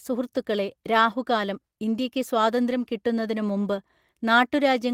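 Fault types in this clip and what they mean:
Lost packet rebuilt from error correction: at 1.89 to 1.91 s, just after "സുഹൃത്തുക്കളേ രാഹുകാലം", and again at 2.71 to 2.73 s, a single 20 ms packet of speech went missing. The following packet carried a low-bitrate backup copy of it, and the decoder played that copy in its place. Neither spot has a gap, but each 20 ms stretch sounds briefly rougher and noisier than the audio around it.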